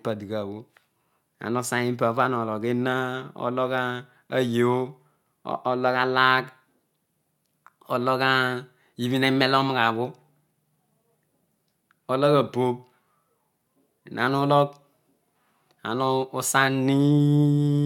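No technical faults can be heard anywhere in the recording. There is nothing to place on a timeline, since no event stands out from the ongoing speech.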